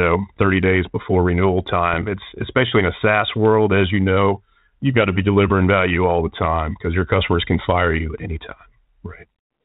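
At 1.93 to 1.98 s, just after "days before renewal", bit errors on an ADPCM link cause a pop with a short rough burst. The flipped bits, at a very low error rate, upset the decoder's step size and predictor. The damage rings on briefly, confined to what sounds like one frame of the 32 kbit/s G.726 stream.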